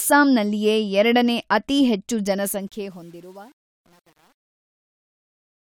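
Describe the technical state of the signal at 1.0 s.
At 1.0 s the speech signal is intact, with no audible fault.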